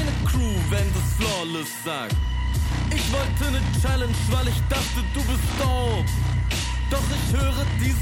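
No technical faults can be heard anywhere in the audio; the signal stays steady and intact throughout.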